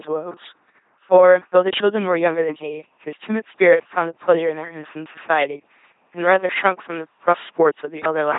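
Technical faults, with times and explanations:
Throughout, LPC-10 vocoder: the speech comes out as a buzzing, mechanical robot voice, with sudden buzz or hiss wherever the voicing decision goes wrong, and nothing above 3.8 kHz. The coder treats each moment as wholly voiced or wholly unvoiced, driving a short vocal tract filter with either a pulse train or noise, so natural texture is lost. The heavy damage fits a 2.4 kbit/s rate.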